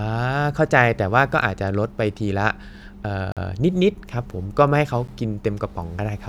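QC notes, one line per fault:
3.32–3.37 s, block of digital silence: the speech drops abruptly to silence for about 46 ms and returns with no fade, heard as a short hole. The length fits a 2048-sample buffer left unfilled.
5.07 s, block of digital silence: a shorter 12 ms dropout to silence, heard as a single tick rather than a gap. Its length fits a 512-sample buffer left unfilled.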